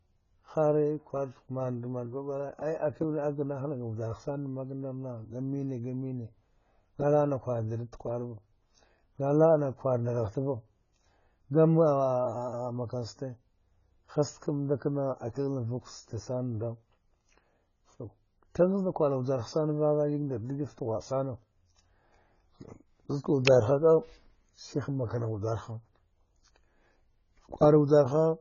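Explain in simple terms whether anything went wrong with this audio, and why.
The speech sounds dull and smeared from start to finish, with nothing above 7 kHz. The likely cause is heavy AAC compression, which threw away fine detail.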